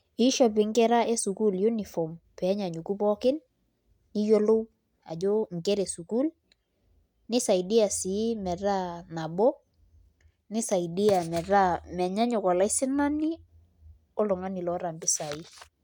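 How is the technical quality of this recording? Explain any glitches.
Nothing to worry about here: the speech recording has no technical glitches to point out.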